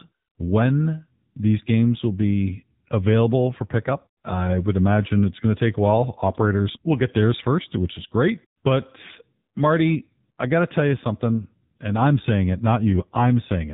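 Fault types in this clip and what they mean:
AMR narrowband mobile codec: Across the whole clip the speech sounds boxed-in and muffled, with nothing above 4 kHz, and a buzzy, synthetic edge that is plainly audible. This comes from the narrowband mobile speech codec, here at a low rate of 7.4 kbps. It rebuilds the voice from a vocal-tract model excited by a handful of pulses per short subframe, so with so few bits the natural texture gives way to that artificial buzz.
AMR bit errors: From about 9.04 to 9.09 s the speech briefly turns hoarse, scratchy and gargly, though its pitch and loudness stay roughly in place. The damage lasts about 50 ms, which fits two 20 ms codec frames. A weak link flipped a few percent of the less protected bits in those frames while the checks on the essential bits still passed. The decoder then placed the excitation pulses wrongly and used slightly wrong spectral and gain values.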